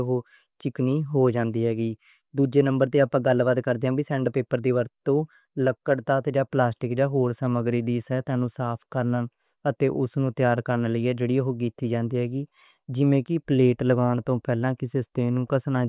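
Speech recording, no technical faults detected at any point.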